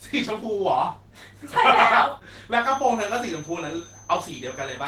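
From the start, the speech carries a grainy, hoarse roughness, likely Opus compression running at a low bitrate that fits around 16 kbps in its hybrid speech mode. The band stays full, reaching about 20.2 kHz, and it lacks the swirling, holey texture of MP3, sounding noisy instead.

At 2.57 s a thin, steady whistle at 6.2 kHz appears and continues to the end, sitting well below the speech. This is a feedback whistle, likely from a loudspeaker-to-microphone loop held just short of instability. Unlike full howl, it swells and fades slowly in level but never builds into a howl.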